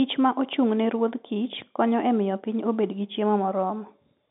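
No technical faults are audible.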